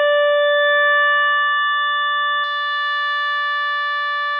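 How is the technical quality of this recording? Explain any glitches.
The recording has one clear fault. From the start to 2.44 s, the music sounds as though the input was likely switched to a poorer device: a narrower capture path with nothing above 3.8 kHz, so it sounds dull and boxy, with a faint added noise floor about 40 dB down. At 2.44 s it opens up again with no gap, and the level shifts by about 5 dB.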